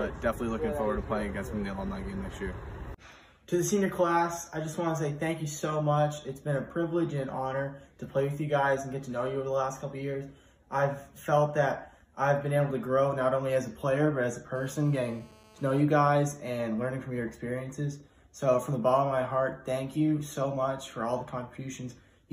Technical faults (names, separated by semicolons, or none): GSM phone buzz